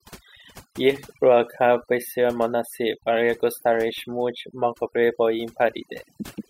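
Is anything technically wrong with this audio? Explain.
Yes, there's overdone noise removal running through the whole speech clip. The noise reducer was pushed too hard, so it kills any frequency band sitting near its noise estimate, taking soft parts of the voice along. You get near-silent gaps with twinkly specks.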